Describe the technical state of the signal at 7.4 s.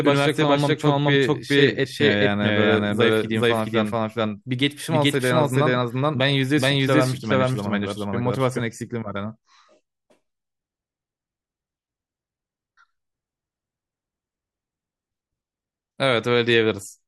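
At 7.4 s the speech is heard twice: a second, equally loud copy trails the first by roughly 0.4 s, so each syllable echoes back without any decay or room colour. This doubled audio track is already running when the clip begins and stops abruptly at 8.6 s. The likely cause is the same signal reaching the mix a second time through a slower path, leaving two full-band copies out of step.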